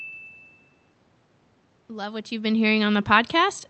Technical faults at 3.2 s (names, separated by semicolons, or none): automatic gain rising